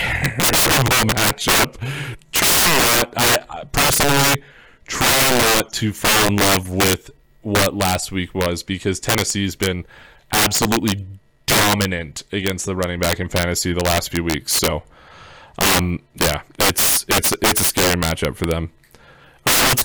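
Integer overflow runs through the whole speech clip: the signal is driven about 21 dB too hot, and instead of being limited, every peak past full scale wraps to the opposite sign. Roughly 7 percent of samples flip this way, producing violent cracks on louder syllables, with sudden sign-flipping waveform spikes and bright vertical broadband streaks on a spectrogram.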